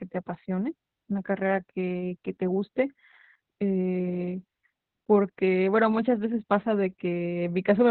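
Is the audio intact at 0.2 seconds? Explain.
No. At 0.2 s the speech already carries Opus voice compression, present throughout. Its linear-prediction SILK coder, at a rate that fits about 8 kbps, keeps a narrow band and coarse excitation, so the speech sounds muffled, hoarse and slightly robotic. A spectrogram shows a flat ceiling near 4.5 kHz.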